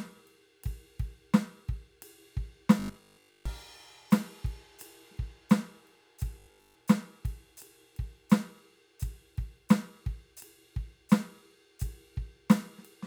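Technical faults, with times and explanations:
2.80–3.46 s and 6.39–6.75 s, robotic sound from repeated short buffers: the music becomes a rigid 50 Hz metallic buzz, likely from replaying 20 ms chunks while most new audio was skipped.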